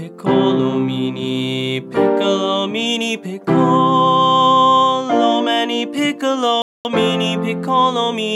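At 6.62 s the sound cuts out to dead silence. The gap lasts about 230 ms, ending at 6.85 s. Then it carries on abruptly with no fade. This is a Bluetooth stall, likely caused by radio interference delaying packets on the wireless link. The headphones' buffer drained before the delayed data arrived. With nothing left to play, output simply stopped. It restarted only once the resent packets came through and refilled the buffer.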